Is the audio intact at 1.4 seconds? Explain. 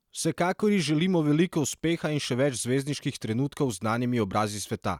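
Yes, the audio at 1.4 s is intact, with no dropout, click, distortion or other fault audible at that moment.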